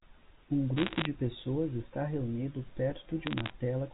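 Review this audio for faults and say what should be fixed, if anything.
Bit errors on a digital phone line crackle through the speech from 0.77 to 1.06 s and again from 3.27 to 3.52 s. Flipped bits in the G.711 A-law stream each corrupt one sample, and hits on sign or high-order bits jump far off the waveform, producing sharp ticks. The density points to roughly one percent of bits in error in the first burst and about half that in the second. Protecting the line with error detection, and concealing or repeating damaged frames instead of playing them, would prevent this.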